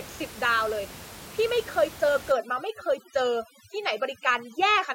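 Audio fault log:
2.32 s to the end, overdone noise removal: the background drops and breaks up into twinkling specks, as bands close to the room noise, about 17 dB below speech, are cut away.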